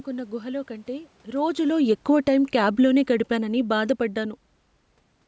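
From 1.3 to 4.48 s, just after "గుహలో కంటే", automatic gain falling lowers the level about 7 dB; voice and room noise sink together, the waveform envelope tapering steadily.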